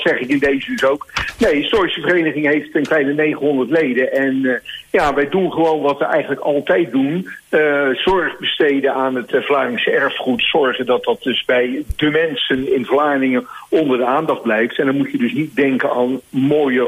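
No technical faults can be heard anywhere in the audio.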